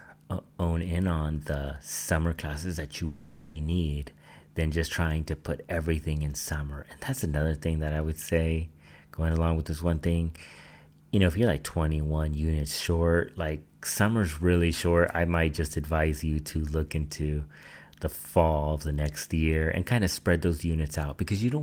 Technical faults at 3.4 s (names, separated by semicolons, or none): long network dropout